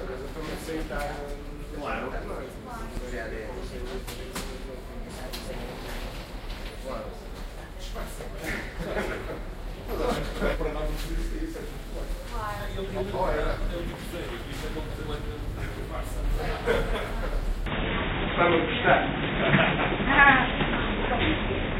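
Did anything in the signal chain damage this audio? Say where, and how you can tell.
Yes. At 2.96 s the driver or buffer stage repeated a 5.8 ms buffer three extra times, which fits a 256-sample buffer. It sounds like a brief buzz rather than a gap, because the audio repeats instead of going silent.

Frames out of order, at the network or codec stage, occur at 3.60–4.01, 5.09–5.50 and 10.16–10.56 s, where 186 ms halves swap, and at 12.85–13.15 and 14.89–15.20 s, where 139 ms halves swap. Each produces a garbled flutter. Unlike a dropout, no time is lost.

From 17.66 s to the end, the input likely switched to a poorer device. Nothing is present above 3.8 kHz, the level shifts by about 5 dB, and a new noise floor sits about 30 dB down, with no silence at the switch. A codec's low-pass filter would not change the level or the noise like this.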